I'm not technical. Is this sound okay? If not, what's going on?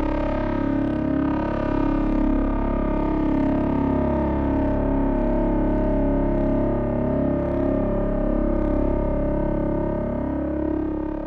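Yes, the sound comes across intact, with no technical faults to hear anywhere in it.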